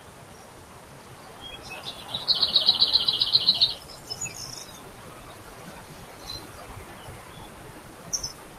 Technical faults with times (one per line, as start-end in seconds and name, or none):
0.00-8.59 noise suppressor applied to music or sounds